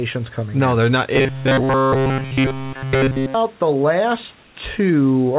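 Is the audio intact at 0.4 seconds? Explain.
Yes, the audio is intact at 0.4 seconds, with the speech carried cleanly through the call path's band-limited channel and only faint room noise sitting well below it.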